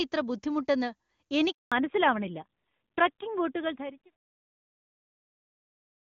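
Speech clip from a phone call, with two faults. A handover gap silences everything from 1.52 to 1.72 s, a 200 ms hole where no frames arrived while the call switched networks, seen as a flat waveform line. Right after, from 1.72 s, a fallback to narrowband leaves nothing above 4 kHz. On a spectrogram this appears as a hard ceiling where the upper band vanishes, and the sound turns duller and rougher, which points to a switch from HD Voice to a low-rate narrowband codec. Before the gap, the wideband audio sounds clear. The smooth fade-out, running from around 3.5 s to 4.16 s, tapers the waveform gently without a click.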